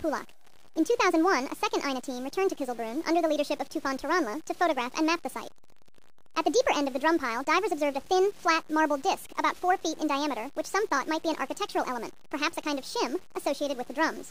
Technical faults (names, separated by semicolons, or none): wrong sample rate